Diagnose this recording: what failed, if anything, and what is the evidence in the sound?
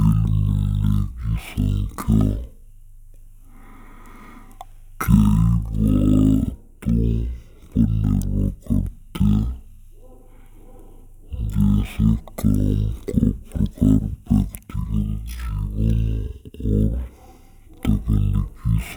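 The whole speech clip plays at half speed and a full octave low, a classic stereo read as mono at the sample-format stage. The interleaved left and right samples get treated as one channel, so every frame becomes two consecutive samples, doubling the length and halving the pitch.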